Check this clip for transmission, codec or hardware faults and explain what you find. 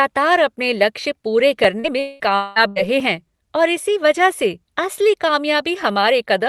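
Yes, there are several faults, all packed between 1.6 and 3.0 s of this speech clip, heard over a call codec whose top end stops at about 12 kHz.

At 1.64 s and again at 3.00 s there is a sharp tick. Each is a block of digital silence, roughly 2.7 ms of zeroed samples, consistent with a 128-sample output buffer that wasn't filled in time.

From 1.80 to 1.87 s the speech briefly smears and wobbles. This is short concealed packet loss: about 40 ms of audio never arrived, and the receiver extrapolated the preceding sound to bridge the hole before blending back into real audio.

From 2.00 to 2.23 s and from 2.36 to 2.59 s the speech gives way to a synthetic buzz or hiss that fades, lasting about 200 ms each time. The likely cause is a long network dropout, with concealment stretching the last sound across the entire missing stretch before the audio resumes further on.

From 2.68 to 2.79 s there is a shorter held buzz or fading hiss before speech resumes with a jump. 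This is a burst of packet loss of about 80 ms, covered by continuing and attenuating the preceding sound, so that section of speech is missing.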